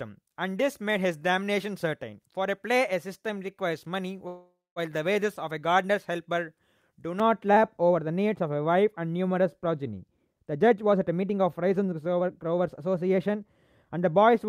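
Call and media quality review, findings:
Call audio freeze, 4.27–4.79 s: sound stalls, decays, then about 0.22 s of silence before resuming intact. Likely jitter buffer ran empty on delayed packets; 0.49 s inserted, latency raised accordingly.

De-emphasis applied wrongly, 7.20 s to end: smooth treble roll-off, about 11 dB down at 10 kHz relative to 1 kHz. Muffled, dull speech from an unneeded or doubled de-emphasis filter.

Jitter buffer speed-up, 10.05–13.43 s: speech runs at 114% speed, pitch unchanged, sounds hurried. Receiver trimming pitch-period slices to drain excess buffer; roughly half a second removed.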